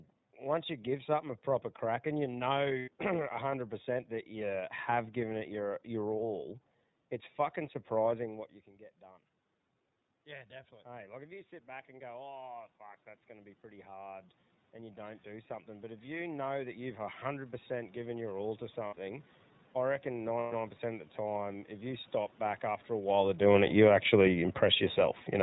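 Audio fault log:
throughout: iLBC codec. The speech is squeezed into a narrowband channel, and its bitrate fits 13.33 kbps with 30 ms frames. Nothing above 4 kHz survives, so a spectrogram shows a hard ceiling there. The coding damage is plainly audible as a rough, slightly synthetic texture.
2.79–2.88, 18.87–18.94, 20.39–20.53: lost iLBC frames. Gaps of 90, 60 and 120 ms, the first right after "proper crack and you". The decoder repeats the last pitch cycle with added noise, which sounds like a held, buzzy vowel. Each frame decodes independently, so clean speech resumes immediately.
23.06–25.27: automatic gain falling. Gain control judged the input too loud or its background noise too strong and eased its level down by about 3 dB over roughly two seconds. Speech and background sink together. This shows as a steadily shrinking waveform envelope and dimming spectrogram energy, distinct from the talker's own movement near 23 s.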